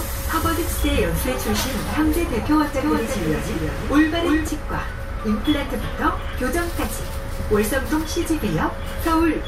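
From 2.80 s to 4.48 s, the audio is heard twice. This is a doubled audio track. A second copy trails the original by about 300 ms. It sits roughly 5 dB below the first. The copy is full-band and dry, with no decay or room colour. It cuts in abruptly at 2.80 s and drops out just as sharply at 4.48 s. The likely cause is a second capture through a slower path, mixed back in out of step.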